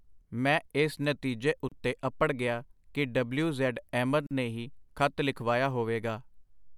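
At 1.69 to 1.72 s the speech stops for about 30 ms between "ਮੈਂ ਇਸ ਨਤੀਜੇ" and "ਅਪੜ ਗਿਆ ਕਿ ਡਬਲਯੂ", and at 4.27 to 4.31 s it stops again for about 43 ms. Both are gaps at a join of encoded pieces. The segments were encoded separately and joined untrimmed, so each encoder's start-up delay and final-frame padding remain as silence. The gaps have smeared edges, and the speech resumes exactly where it broke off.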